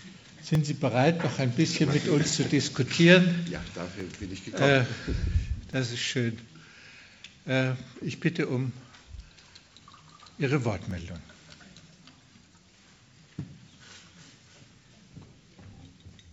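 From 0.55 s to 16.09 s, about ten clicks recur every 1.73 s. This strict regularity, unlike random packet-loss glitches, marks clock drift buffer slips, likely from mismatched device clocks.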